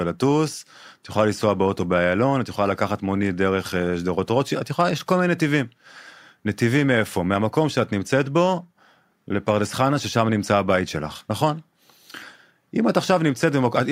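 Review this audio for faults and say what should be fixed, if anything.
Nothing in this recording needs fixing. No technical fault turns up anywhere in the speech.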